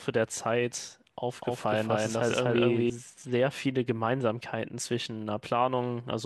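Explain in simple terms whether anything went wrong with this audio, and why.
Between 1.42 and 2.90 seconds the speech suddenly gets a second, identical copy of itself trailing about three tenths of a second behind, at roughly the same loudness. It sounds like a stuttering double rather than a natural echo, because the copy is just as clear and has no roominess or fade. This is a doubled audio track, most likely from the same sound being recorded twice through a slower second path. The copy appears and disappears abruptly at those two times.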